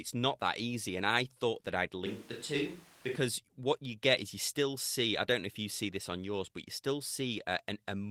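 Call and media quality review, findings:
2.06–3.16 s: speech abruptly turns roomy and hollow, bass thinned, level roughly unchanged, room noise about 20 dB below speech. Likely a switch to a distant microphone. Spectrogram shows reduced lows, smeared reverb tails, raised noise floor, hard boundaries.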